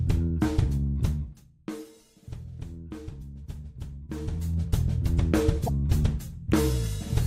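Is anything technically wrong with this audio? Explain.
Yes, two kinds of fault are audible.

Zipper noise: from 0.88 to 1.92 s the gain drops about 15 dB in unsmoothed 1 dB steps, roughly thirty a second, and from 4.06 to 4.58 s it climbs back about 15 dB the same way. Each jump clicks, so the sound ticks and zips while the level moves.

Damaged data in a compressed stream: around 3.18 to 3.22 s and 5.65 to 5.69 s, corrupted bytes leave the decoder unable to read its frames, so it loses sync and hunts for the next header. Each spot is a brief chirp or blip.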